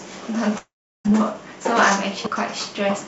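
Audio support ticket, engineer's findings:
Long network dropout, 0.58 to 1.06 s. Sound smears into a fading buzz, then goes silent. About 0.72 s never arrives. Likely cause: packet loss outlasting the jitter buffer's concealment, which gives up after its fill. Playback resumes with the gap unrecovered.

Audio missing between chunks, 2.26 s. Abrupt skip, with the two sides butted together and no silence, losing roughly a third of a second. Likely a capture or processing handoff at a 1 s chunk boundary dropping samples. Band-limited to 8 kHz via G.722.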